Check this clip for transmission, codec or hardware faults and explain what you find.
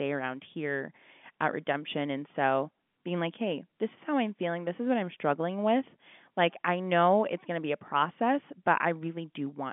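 Nothing stood out on listening to this speech, which comes across with the narrow band of an ordinary telephone line.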